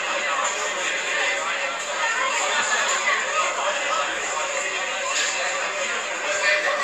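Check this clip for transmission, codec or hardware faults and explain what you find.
No faults detected.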